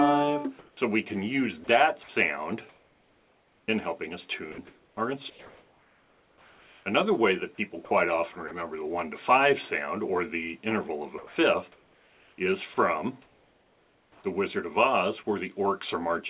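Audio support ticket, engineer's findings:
Comfort noise in place of the background, 0.59–0.77 s and 2.69–3.68 s. Likely sender-side discontinuous transmission: voice detector stops sending, receiver synthesises noise. Real background (about 36–39 dB below loud parts) becomes flat, featureless hiss for 180 ms, then 990 ms; level about 3 dB up, then about 2 dB down.

Sound chopped by the voice detector, 1.64–2.09 s, 4.52–6.86 s, 7.55–8.51 s, 11.18–14.24 s. Likely the same detector toggling send/no-send repeatedly within each stretch. Quiet portions and edges replaced by comfort noise (90 ms, 1.92 s, 150 ms, 1.89 s in total), so the sound chops. Band-limit at 4 kHz from the call path, fits G.711 A-law.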